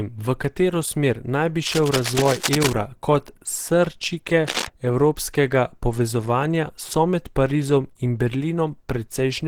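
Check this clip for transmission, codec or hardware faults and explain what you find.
Two faults are present: codec damage across the whole clip, and two bursts of cable scratch noise.

The speech carries plainly audible Opus compression damage from start to finish. The likely cause is an encoder running short of bits in its hybrid mode, where a speech coder handles the low band and the music coder fills the top. The band still reaches about 20.2 kHz. The sound fits a rate near 16 kbps. The voice sounds hoarse and muffled. The upper band sounds grainy and noisy rather than clean.

Cable scratch noise appears twice. The first burst runs from 1.66 to 2.73 s, after "katero smer naj bi" and before "kot srčike evropskega povezovanja". The second runs from 4.47 to 4.67 s, between "kot srčike" and "evropskega povezovanja so med". The likely cause is a worn connector or cable being moved. Its contact resistance jumps about rapidly. 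That adds dense, uneven crackle. It sits only a little below the speech level, so the rustling scratch is clearly heard over the voice.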